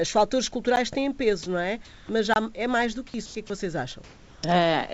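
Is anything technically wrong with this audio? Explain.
Yes. There are two blocks of digital silence: a 10 ms gap at 0.76 s and a 24 ms gap at 2.34 to 2.36 s, just before "é mais do que". The sound drops abruptly to silence, as when an output buffer is not filled in time.

Comfort noise in place of the background appears at 1.85 to 2.09 s after "têm peso não é", at 3.26 to 3.35 s between "é mais do que" and "que é que vocês", and at 4.04 to 4.43 s. The likely cause is discontinuous transmission, where the receiver fills pauses with generated noise. The real background gives way to steady, featureless noise, about 3 dB off the original level in the first pause and close to the original level in the other two.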